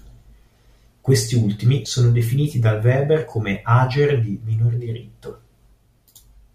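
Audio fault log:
1.85 s, corrupt frame decoded. A brief chirp, squeak, blip or burst of noise sits just before "sono definiti dal". It lasts about 10 ms, which points to a single damaged frame. Flipped bits were decoded anyway. Misread codes put energy at wrong frequencies. The burst peaks near -30 dBFS.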